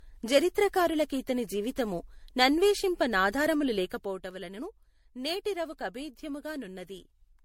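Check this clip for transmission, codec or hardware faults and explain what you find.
One codec fault runs through the whole recording: generation loss. The speech sounds swirly, smeared and hollow throughout, and consonant attacks are blurred. The likely cause is repeated lossy coding, with the speech decoded and re-encoded around five times. The character fits MP3 at about 64 kbit/s. Each new pass quantises on a shifted frame grid, so noise and spectral gaps pile up. On a spectrogram, nothing appears above 16.5 kHz, with patchy holes and smeared onsets below.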